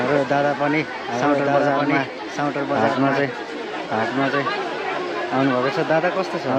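From the start, a doubled audio track runs throughout. An equally loud, full-band copy trails about a second behind, dry and unchanged. A second capture path likely caused it.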